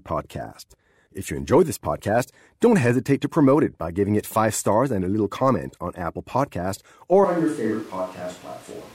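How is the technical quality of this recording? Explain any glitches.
The recording has one glitch, near the end. At 7.25 s the speech turns suddenly roomy and hollow and stays that way to the end: it loses bass, drops about 5 dB in level, and the background noise rises to roughly 25 dB below the speech. This is likely a switch to a distant microphone, with the close mic's signal lost and a farther pickup taking over. A simple gain drop wouldn't add room sound, and added reverb wouldn't thin the low end or bring up the noise floor.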